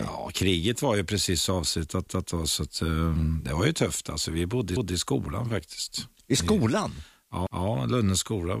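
Speech with overlapping chunks: at 2.07–2.27 s (after "var ju precis avslutat"), 4.77–4.97 s (after "vi bodde i") and 7.47–7.67 s, a 200 ms piece plays twice, heard as a stutter with a click at each join. Each 2.5 s chunk begins before the previous one ended. On a spectrogram the same harmonic pattern appears twice side by side, and the waveform shows an abrupt discontinuity at every join.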